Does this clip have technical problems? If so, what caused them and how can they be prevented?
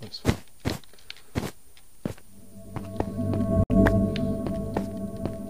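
Yes. AAC frame loss with muting leaves a soft-edged gap from 3.64 to 3.71 s. About 64 ms of sound fades out and back in, consistent with roughly three lost frames. Protecting the stream with error correction or retransmission would prevent this.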